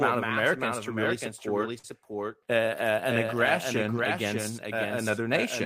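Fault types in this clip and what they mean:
Doubled audio track: a second full-band copy of the whole clip runs about 0.7 s behind the first and only a few decibels quieter, likely from a second capture path. Unlike an echo or reverb, it has no decay and no room colour.
Short stall from a late packet: from 1.78 to 1.85 s a sound is held about 53 ms too long before the audio resumes where it stopped. Unlike a dropout, nothing is missing. The audio only runs slightly later afterwards.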